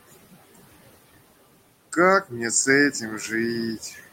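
Noise suppressor artifacts run throughout: steady background is pulled down by about 18 dB between phrases, leaving residue that shows as flickering, patchy speckles on a spectrogram. From 3.81 to 4.01 s comes speech cut by the noise suppressor: roughly a tenth of a second of soft sound is dipped up to about 7 dB, visibly thinning the waveform and spectrogram there.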